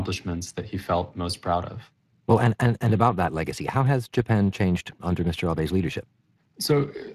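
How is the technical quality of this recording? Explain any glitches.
The quality is held back by Speex codec damage, plainly audible across the whole clip. The CELP coding, likely at something near 22 kbps, leaves the speech hoarse and grainy, with nothing above 15.4 kHz.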